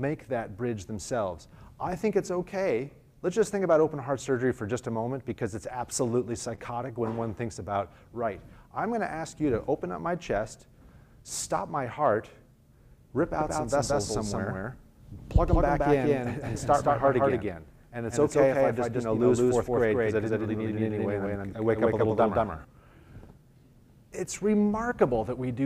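At 6.55 s, a short stretch of the stream failed to reach the decoder in time, a case of short concealed packet loss. About 20 ms was missing, and the receiver patched roughly 19 ms of it by extending the preceding sound before blending back into the real signal near 6.59 s. The result is a brief smear or wobble in the audio, and anything very short in that instant may be lost.

From 13.41 s to 22.65 s, a doubled audio track appears. The likely cause is a second, slower capture path or an edit that left two copies running out of step. A full-band copy trails the original by about a fifth of a second at roughly the same level, with no decay or room colouring. It sounds like a dry, flat echo of everything that switches in abruptly and cuts off just as sharply.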